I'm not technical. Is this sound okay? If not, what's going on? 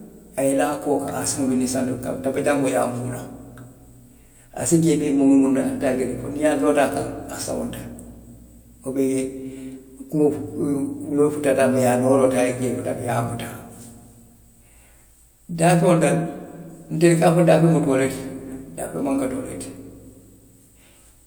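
Yes, nothing wrong here.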